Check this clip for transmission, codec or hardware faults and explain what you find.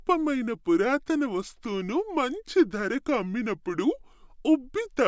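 One fault runs through the whole clip: a wrong sample rate. The speech plays at about 0.73 times its original speed and roughly 5.5 semitones lower, which fits audio recorded near 22 kHz but played at 16 kHz without conversion. Pitch and tempo drop together by the same ratio, unlike a pitch shift or time stretch, which would change only one of them.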